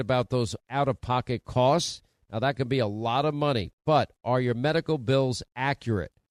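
No technical faults are audible.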